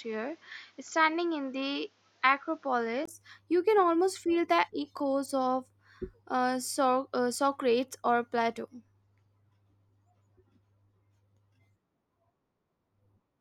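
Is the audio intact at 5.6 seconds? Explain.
Yes, the speech at 5.6 seconds plays through intact, with no audible fault at that moment.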